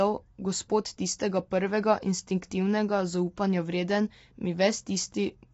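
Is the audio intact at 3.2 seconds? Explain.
No. Low-delay AAC compression likely runs throughout. Coarse coding at the low bitrate leaves noise between the harmonics, so the voice sounds rough and grainy. Nothing sounds above 7.7 kHz, which fits a low bitrate near 24 kbps.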